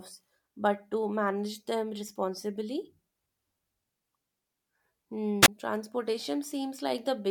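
At 5.42 s a burst of hiss swells, the speech drops into a hole of near silence lasting 20 ms, and it returns by 5.48 s. This is a wireless microphone squelch dropout: the FM radio signal faded enough that the receiver's squelch muted its output.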